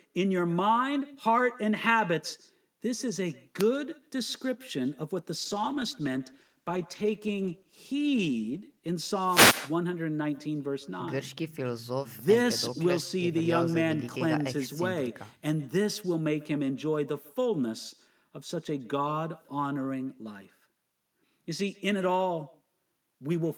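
Echo with no canceller runs through the whole clip. The far end's loudspeaker feeds its microphone, and nothing removes the pickup. Every phrase returns after around 150 ms as a copy about 22 dB below the speech. It sounds like a trailing shadow.

At 3.59 to 3.63 s comes a wireless microphone noise hit. The analogue FM radio signal faded as reflections cancelled. Receiver noise rose through the gap. It is a short swish of static.

From 5.37 to 9.01 s there is a call bitrate drop. The bandwidth estimate fell, and the encoder went from 48 to 18 kbps. It stayed at the lowest rate for 3.56 s. Coarser coding makes the sound rough, watery or muffled. It clears by 9.01 s.

A second wireless microphone noise hit follows at 9.24 to 9.65 s. This fade lasts longer, about 0.4 s. Static rises over the audio for that stretch.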